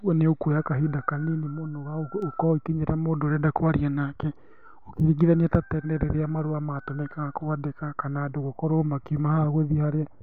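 Speech with word clock ticks from 0.83 to 9.17 s: about seven sharp clicks, roughly every 1.5 s, each a single sample slipped between unlocked digital clocks.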